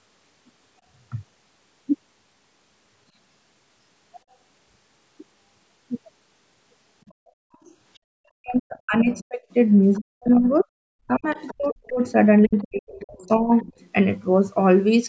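Speech here, band-limited to 8 kHz by the call's mic processing, and the back half gets messy. From 7.09 to 7.98 s, 9.13 to 10.29 s, 11.3 to 11.92 s and 12.45 to 13.89 s there's a faint second voice underneath, starting very quiet and creeping up to roughly 25 dB under the talker. That's the other side's voice leaking through, likely loudspeaker playback the echo canceller didn't fully subtract. The background gets gated by the echo canceller twice, at 7.22 to 7.38 s and 7.98 to 8.13 s. The room tone drops out by about 39 dB and then about 33 dB, and snaps back after roughly 150 ms each time as the canceller releases the mic. The talker's own speech also gets suppressed in double talk from 8.41 to 9.42 s and again from 9.96 to 13.52 s. It dips and chops, sometimes by as much as 40 dB, likely because the canceller couldn't tell the talker from the far-end echo while both were talking and turned everything down.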